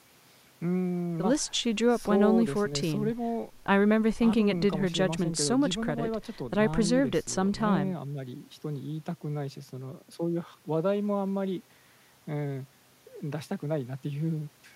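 No technical faults can be heard anywhere in the speech. Nothing in the recording calls for a time mark or a measurement.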